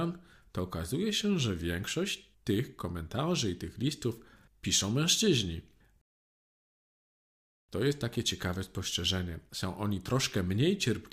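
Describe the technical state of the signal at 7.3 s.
At 7.3 s the speech sits in a rebuffering stall from 6.01 to 7.69 s: playback starved for data, fell silent, then resumed exactly where it stopped, adding 1.68 s.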